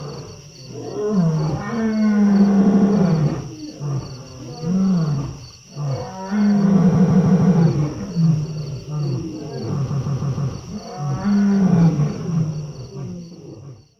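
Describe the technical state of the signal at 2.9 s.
Repeated frames run from 2.65 to 2.89 s: a 78.4 ms block plays three extra times, a stutter adding 0.24 s, with nothing missing, unlike a dropout.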